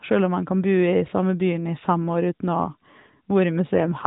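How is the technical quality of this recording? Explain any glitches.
The speech has passed through the AMR narrowband mobile codec, so nothing above 4 kHz is present, and one glitch comes right at the end. An AMR rate drop runs from 3.76 s to the end: the voice turns buzzier and more synthetic, which fits the codec falling from 12.2 to 5.9 kbps to protect a weak link. Unlike a dropout or a bandwidth switch, there is no gap and the band stays the same.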